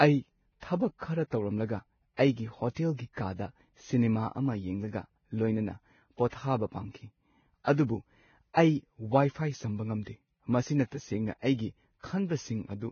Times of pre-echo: 6.28-6.32, 8.53-8.57, 10.04-10.07

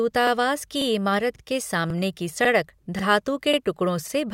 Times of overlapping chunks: 0.27-0.32, 0.81-0.86, 1.36-1.40, 1.90-1.95, 2.45-2.49, 2.99-3.04, 3.54-3.58, 4.08-4.12

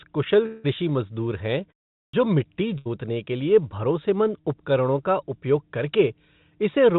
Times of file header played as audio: none

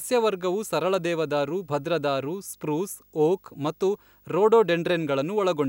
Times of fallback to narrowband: none

